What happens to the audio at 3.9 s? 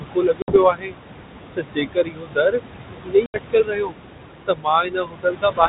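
At 3.9 s the sound is near the end of a stretch of speech cut by the noise suppressor, running from 3.03 to 3.95 s. The suppressor mistook parts of the speech for background noise and pulled them down with it, by as much as about 22 dB, for roughly 0.7 s in total. Soft consonants and word endings sound swallowed or faint. On a waveform the envelope shrinks sharply in those patches. On a spectrogram the weaker speech energy, especially faint high-frequency detail, drops toward the noise floor.

Noise suppressor artifacts are also present here, as throughout the clip. The suppressor lowers the room noise by about 22 dB in each band it judges to be steady noise, frame by frame. The leftover noise sinks in pauses and rises under the speech. A spectrogram shows the background as a patchy, pumping floor instead of a smooth wash.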